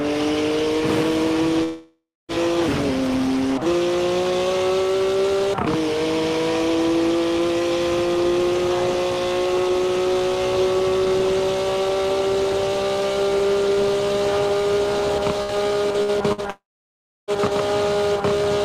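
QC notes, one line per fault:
1.63–2.32 s, long network dropout: the last sound is stretched into a fading buzz or hiss, then about 0.28 s of silence, and the audio resumes with roughly 0.66 s skipped, likely a network outage. The spectrogram shows smeared, repeating harmonics thinning to an empty band, and the waveform shows a decaying envelope to flat.
15.43 s, 16.02 s, 16.32 s, burst of packet loss: three gaps, each about 60 ms of missing audio, are covered by a brief held, softened continuation of the preceding sound before playback jumps ahead. Each appears as a short, flattened, smeared patch in the spectrogram and a small dip in waveform level.
16.50–17.31 s, long network dropout: right after the bursts, the sound carries on briefly as a fading buzz or hiss, then goes silent for about 0.66 s before returning with roughly 0.78 s lost. On the waveform there is a short taper to a flat line, and on the spectrogram a near-empty gap with an abrupt restart.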